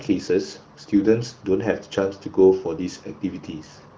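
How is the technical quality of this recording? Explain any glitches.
The technical quality holds up, with no glitches to explain in this speech recording, which comes through AMR wideband (HD Voice) at a clear, high rate.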